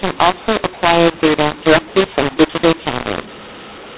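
The mu-law and A-law mix-up runs throughout: A-law telephone samples decoded as mu-law scramble levels, making speech harsh and distorted and filling pauses with noise.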